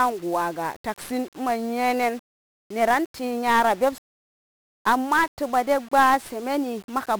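From start to finish the speech carries the signature of 1-bit DFPWM compression, damaged heavily. DFPWM codes each sample as a single bit that nudges an adaptive charge up or down, so the waveform is only tracked approximately and the error becomes dense broadband noise. The result is a constant fuzzy, crackling texture with the upper frequencies submerged in hiss, and the density of that noise fits a rate of around 48 kbps.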